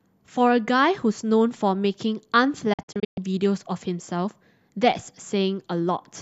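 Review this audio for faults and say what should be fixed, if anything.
A digital broadcast dropout breaks the speech between 2.73 and 3.18 s. The receiver mutes whenever incoming frames are missing or corrupt, so about 264 ms of sound vanishes in several short holes, the longest 120 ms. Each gap is entered and left with an 8 ms fade. On a waveform this looks like a cluster of flat silent stretches. A spectrogram shows vertical blank bands across all frequencies. The missing audio is gone for good. Prevent it with a stronger signal or better antenna placement, or with error protection and concealment in the receiver.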